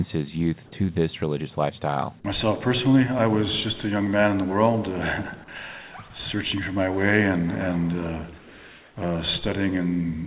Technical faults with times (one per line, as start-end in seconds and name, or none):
8.38-8.96 comfort noise in place of the background